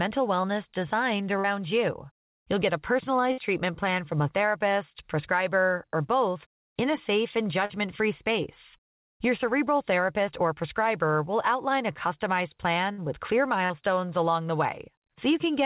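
A brief smear breaks the speech at 0.42–0.46 s, and similar wobbles follow at 1.40–1.46 s. These are short concealed packet losses. About 20 ms and then 40 ms of audio never arrived in time, so the receiver stretched the preceding sound to cover the hole, for about 15 ms and 42 ms, before blending back into the real signal.

At 3.32–3.40 s a held buzz or fading hiss replaces the speech and then cuts to later material. That is a burst of packet loss. About 60 ms went missing in a run, and the receiver extended the last sound for about 58 ms while lowering its level. The clip then resumes past the gap.

Further short concealed packet losses at 7.66–7.72 s and 13.66–13.72 s each replace about 40 ms with roughly 40 ms of continued sound. Between them, a second burst at 12.92–13.00 s fills a 60 ms gap with about 60 ms of decaying carry-over. The call path itself removes everything above 4 kHz, consistent with G.711 mu-law at 64 kbps.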